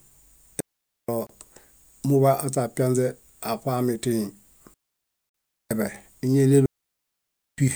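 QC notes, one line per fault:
0.60–1.09 s, 4.74–5.71 s and 6.66–7.58 s, digital wireless dropout: the speech vanishes into near silence for about 0.48 s, then about 0.92 s twice, with no noise burst on either side. The receiver lost too much of the radio data stream to decode, so it muted with a very short fade instead of passing errors through. That leaves clean holes rather than crackle, and the sound resumes just as abruptly once the link recovers.
1.27–1.29 s and 5.29–5.34 s, gap at a join of encoded pieces: brief silences of 27 ms and 49 ms, spaced 4.0 s apart, cut into otherwise continuous sound with edges softened by codec smearing, after which the sound picks up where it left off. The audio was encoded in separate 4-second segments and joined untrimmed, so each encoder's start-up delay and end-of-segment padding remain as dead air. The second gap falls inside the 4.74–5.71 s mute.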